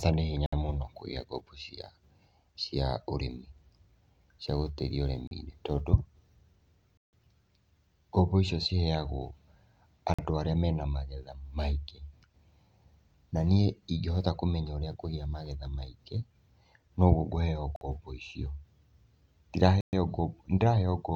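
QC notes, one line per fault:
0.46–0.53 s, 5.27–5.31 s, 6.97–7.13 s, 10.14–10.19 s, 17.76–17.81 s and 19.81–19.93 s: Bluetooth stall. The speech drops to dead silence for 37 to 156 ms, then resumes. The likely cause is radio interference delaying packets, so the headphones' buffer ran empty and playback paused until the resent data arrived.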